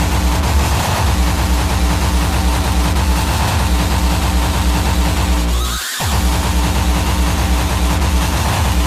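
From start to finish the audio carries a doubled audio track: a second, equally loud full-band copy trails the original by around a tenth of a second, so every onset smears into a flam or short slapback with no decaying tail or room colour. The likely cause is the signal being captured twice, once through a slower path. On a waveform each transient appears as a matched pair; a spectrogram shows every event repeated at that fixed offset.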